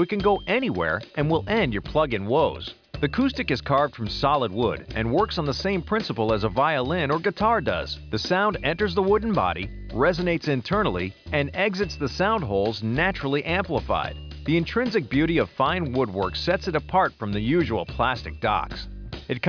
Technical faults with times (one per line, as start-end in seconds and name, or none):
none